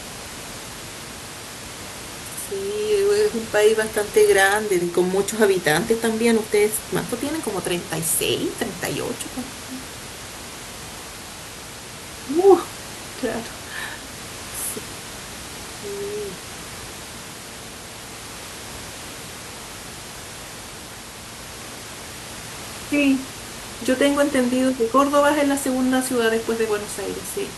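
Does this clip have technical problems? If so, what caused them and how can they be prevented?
No, there are no technical problems in this speech.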